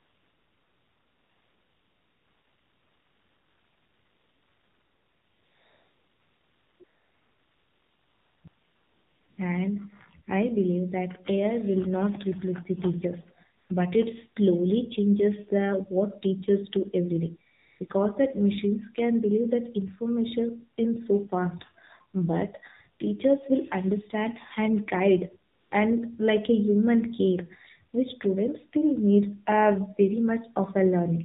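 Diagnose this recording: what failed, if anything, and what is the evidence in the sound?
The speech is buzzy, thin and synthetic-sounding, with nothing above 4 kHz. This is the AMR narrowband mobile codec at a low 7.4 kbps. At the codec stage, a vocal-tract model driven by sparse pulses replaces the real waveform, and the damage is plainly audible.

Smooth, steady hiss stands in for the background at 0 to 6.8 s, 6.84 to 8.44 s, 8.48 to 9.38 s, 13.58 to 13.70 s after "not replace the teachers", 17.52 to 17.80 s and 17.88 s after "every day", and 25.52 to 25.72 s. This is AMR comfort noise: speech frames stopped and synthetic noise filled the gaps.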